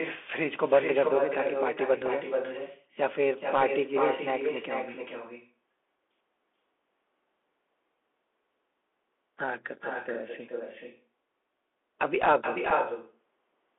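Speech runs through the whole clip trailed by a thinner copy of itself, about 7 dB quieter and arriving roughly four-tenths of a second later. This is echo with no canceller: the far end's loudspeaker feeds its microphone, and nothing strips that return from the line. The audio is also boxed into a narrow telephone band of about 300 Hz to 3.5 kHz, with scratchy sibilants, distortion on loud bright sounds and a granular hiss beneath everything. Those are the marks of the Bluetooth CVSD headset codec, whose single-bit, adaptive-step coding fits a 64 kbps headset link and cannot follow fast high-frequency swings. At 2.07 s and again at 12.70 s the sound drops out for about 3.8 ms, a hard-edged hole that can click. Each gap is unconcealed Bluetooth headset packet loss, which points to a single lost voice packet between headset and phone replaced by silence or an idle pattern rather than being patched over.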